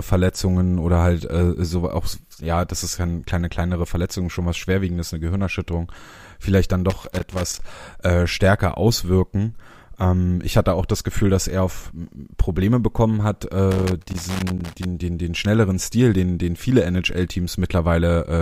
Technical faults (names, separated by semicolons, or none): loose connector crackle